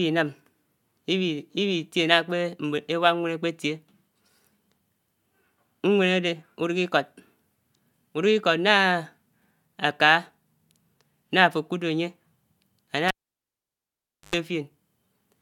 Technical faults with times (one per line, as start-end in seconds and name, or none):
13.08-14.35 cable pulled and plugged in